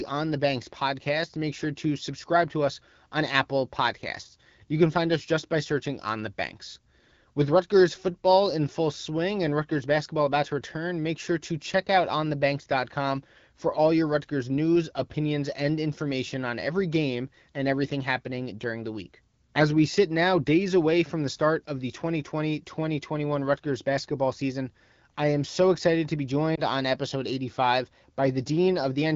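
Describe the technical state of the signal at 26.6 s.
At 26.56 to 26.61 s, between "so excited to be" and "on episode", there is a lost AMR speech frame. The gap matches a single 20 ms frame failing its radio checksum. The decoder bridges it by repeating the previous pitch and spectral envelope at reduced gain, so the sound dips briefly or warbles rather than cutting out, then comes back weak or rough for an instant. The surrounding AMR wideband coding, at 12.65 kbit/s, stays clear.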